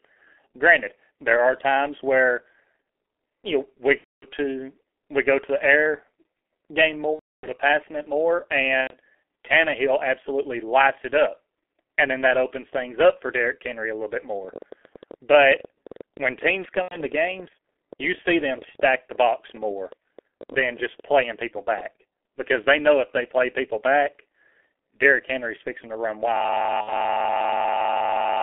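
Throughout, the speech carries the sound of the G.723.1 codec: the band is limited to roughly 300 Hz to 3.4 kHz, and the coding damage is heavy. The voice is muffled and hoarse, and consonants lose their edges. This points to a low-rate coder running at about 6 kbit/s that works in 30 ms frames and updates its model of the voice too slowly to follow fast changes.

The first VoIP packet loss concealed by the speech codec falls at 3.98–4.27 s, a 240 ms gap. The decoder fills it by extending its last pitch and filter settings at falling gain, so the audio smears into a fading, stretched sound. A longer gap follows at 7.13–7.46 s (300 ms), then a shorter one at 8.82–8.95 s (90 ms). After each gap the voice stays weak and distorted for a moment while the decoder's state recovers.

From 14.45 s to 21.81 s a train of clicks runs over the audio. There are around seventy of them, averaging about 11 per second but spaced irregularly. 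Each click has much the same shape and peaks at about the level of the speech, so the ticking is plain both over the voice and in the pauses. The likely cause is interference or a faulty connection or power supply.

Inside that stretch, at 16.82–16.98 s, another concealed packet loss of 90 ms produces the same brief, fading smear.

At 26.37 s a system hang loop takes over and continues to the end of the clip. The driver or machine stalled while the hardware kept replaying the same 40 ms of buffer. That exact repetition at 25 Hz is heard as a harsh, steady buzz or rattle in place of the speech. A further concealed loss of 60 ms at 26.81–26.93 s sits within the looping section.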